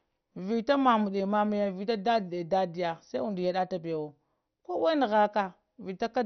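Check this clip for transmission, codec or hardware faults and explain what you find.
One codec fault is present, and it runs through the whole clip.

MP2 compression is the likely cause of what is heard from start to finish. The speech is dull, with nothing above about 6.1 kHz. The damage is heavy. There is a gurgling, granular roughness on the voice. An MPEG Layer II encoder divides the sound into 32 sub-bands and shares out bits among them. Here too few bits were available, which fits a low rate near 48 kbps. So the upper bands are shut off entirely. The remaining bands are coarsely quantised, and that produces the grainy texture.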